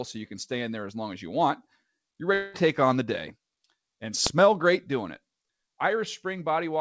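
From 2.34 to 2.56 s, just after "as you want you're", the speech gives way to a buzzy, fading continuation of the last sound for about 200 ms. It never drops to true silence, and the speech resumes at "on the day" with that stretch of about 200 ms simply gone. This is likely a long network dropout: no packets arrived and the receiver improvised. A brief packet loss would leave only a tiny smeared patch, and a plain mute would leave a silent hole. Here the words themselves are missing and a decaying buzz covers the gap.

At 4.27 s, right before "great doing it", a single sharp bang cuts through, lasting about 0.67 ms, which fits a 32-sample processing block. This is invalid numbers at full scale: a calculation produced infinite or undefined values, and the output was forced to one extreme value for the whole block. Ordinary clipping flattens loud peaks that are already in the signal. This bang has no relation to the speech level. 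Because the block is so short, the pop at its start and the pop at its end merge into one click. The audio reached the listener over a G.722 call path at 64 kbps, which is why nothing is heard above 8 kHz.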